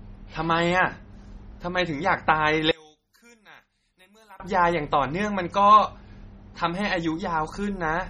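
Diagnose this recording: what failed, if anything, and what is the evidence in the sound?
At the codec stage, the speech sounds watery and swirly throughout, with chirping s sounds, and nothing survives above 14.6 kHz. A spectrogram would show a hard ceiling there and flickering holes below it. This is likely MP3 compression, and the heavy damage fits roughly 32 kbps.

In analogue wiring or the stereo mix, from 2.71 to 4.40 s the mono level drops by about 29 dB, leaving only a faint residue of the speech. The waveform shrinks to a sliver across that span. One channel inverted is the likely cause: the shared centre cancels when both channels are summed.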